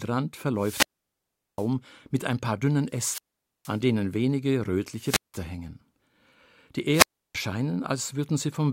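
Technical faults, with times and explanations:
0.54–1.70 s, 2.90–3.81 s, 4.97–5.42 s and 6.91–7.35 s, wireless microphone squelch dropout: the FM radio link fades until the receiver's squelch mutes it. Hiss rises, then silence falls for 0.76, 0.47, 0.18 and 0.32 s, with speech resuming at "mit ein paar dünnen" and "denen wenige".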